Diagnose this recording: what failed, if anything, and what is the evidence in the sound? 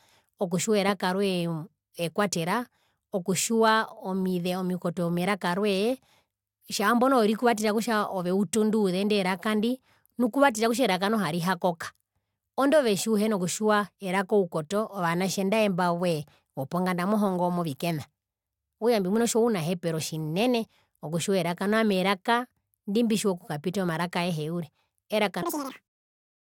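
Audio read two samples at a time (double speed), from 25.43 to 25.95 s near the end of the speech. This is a failure at the sample-format conversion stage. For about half a second the speech runs at twice its pace and jumps an octave higher. The reader is treating each pair of samples as a single frame, as if it expected two channels or samples twice as wide. That plays the material back at 2.0× speed and folds high frequencies back down into the audible band.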